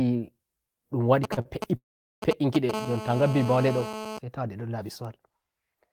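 A galloping dit-dit-dit of short raspy buzzes runs through this speech from 1.24 to 2.71 s, loud enough to sit nearly level with the talker. These are GSM signalling bursts: a nearby 2G phone is handshaking with its network, sending short clusters of radio pulses at about 217 Hz, and the audio circuitry rectifies them into audible clicks and brief buzz fragments that start and stop irregularly rather than holding steady. Inside that stretch, the sound briefly catches and hangs twice, once from 1.34 to 1.39 s and again from 1.41 to 1.47 s, each time with a sound held a moment too long before the speech carries on. Each is a short stall from a late packet. A packet missed its slot, the jitter buffer emptied, and the receiver stretched the last fragment for 29 ms and then 34 ms until the data arrived. Playback resumed from the same point, so nothing was lost, only delayed. From 1.77 to 2.24 s the audio freezes outright. 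The last sound is briefly continued and fades, and about 410 ms of silence follows before speech returns exactly where it left off. This call audio freeze likely comes from packets held up in transit, forcing the receiver to pad roughly 450 ms until the stream caught up, which inserts a gap without dropping any content. From 2.74 to 4.19 s a hard, steady, harmonically rich buzz sits about 10 dB below the speech and has no relation to it. This is GSM phone buzz from a nearby 2G phone, now in an active call and transmitting continuously at 217 bursts per second, which the circuitry demodulates into a constant tone with a dense stack of overtones.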